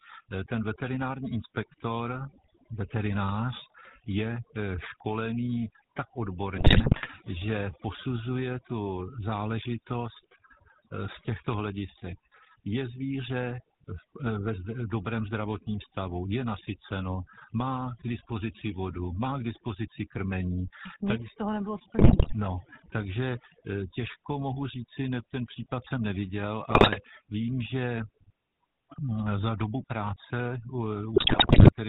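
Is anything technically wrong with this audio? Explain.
Yes, three faults are audible.

Overdone noise removal runs throughout. Aggressive spectral suppression strips bands near the noise estimate, leaving near-silent gaps with twinkling specks.

The GSM full-rate codec is also present throughout. Its pulse-excited vocal-tract model, which fits 13 kbps full rate, cuts everything above 4 kHz and gives the speech a plainly buzzy, gravelly roughness.

GSM bit errors strike at 6.56–7.07 s (after "školený tak", before "že posuzuje tu záležitost"), 21.98–22.33 s (after "tak z toho nebylo"), 26.70–27.04 s (after "ten případ jsem neviděl", before "vím že") and 31.16–31.71 s. Corrupted filter, pitch and gain values distort each frame into squawks, pops and gargling.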